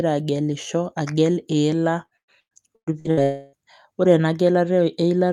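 Network packets in this speech recording went missing over and over from 2.05 s to 3.20 s, just after "agelisho agel iila". That is repeated packet loss, and it produces a choppy, robotic sound. Eight gaps were each patched by extending the previous sound, covering about half a second in total, with the longest hole 113 ms. Nearly half that stretch is synthetic fill. Right after, from 3.23 s to 3.56 s, a long network dropout is the likely cause of a 300 ms hole ending before "ore ena". The receiver stretches the last sound across the whole gap as a fading buzz rather than falling silent, and the original audio there never returns.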